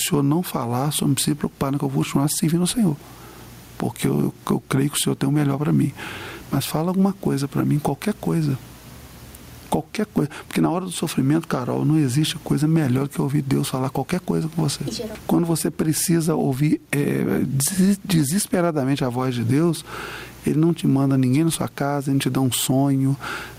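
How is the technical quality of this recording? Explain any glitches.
The recording has one persistent fault: gain pumping throughout. The gain ducks under each loud sound, with a swing of around 15 dB, most likely from input gain set far too high and a fast limiter clamping every peak, leaving the level squashed.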